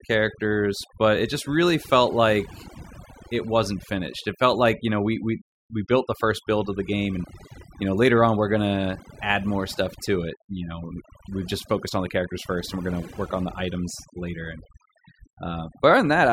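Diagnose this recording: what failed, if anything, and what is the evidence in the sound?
What failed here is overdone noise removal, somewhere in the processing chain, with a noise suppressor cranked way past sensible. It runs the whole way through the speech: the background drops away and breaks up into little twinkling specks. The suppressor is treating any frequency band near its noise estimate as junk and pulling it down hard, so the quieter parts of the voice get dragged out along with the noise.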